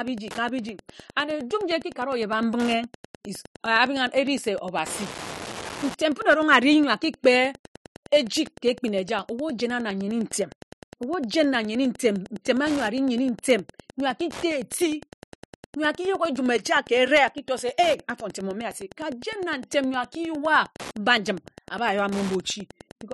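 A steady ticking runs under the speech from start to finish, repeating about ten times a second and sitting roughly 20 dB below the speech. This is Wi-Fi interference. A Wi-Fi radio near the audio circuit transmits a beacon every 102.4 ms, and the circuit rectifies each radio burst into an audible click. Because the beacon timing is fixed, the clicks form an even pulse.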